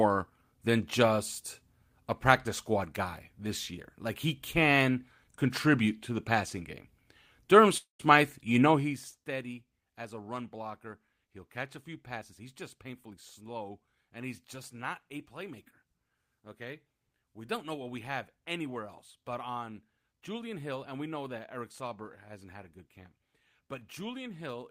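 At 7.77 s the sound stops moving forward for about 0.24 s, with the last sound carried on as a fading buzz or hiss before about 130 ms of silence. This is a call audio freeze, likely from packets held up in transit so the jitter buffer ran dry. Unlike a dropout, nothing is lost: the audio resumes where it left off at 8.01 s, so about 220 ms of delay has been inserted.

From 12.18 s, just after "catch a few", until 13.96 s, where "and he's just not" follows, the speech runs at about 112% speed. This is a jitter buffer speed-up: to work off excess buffered delay, the receiver cut out short pitch-period slices over and over, about a fifth of a second in total. The pitch stays the same, which distinguishes it from a sped-up recording, where the pitch would rise along with the tempo.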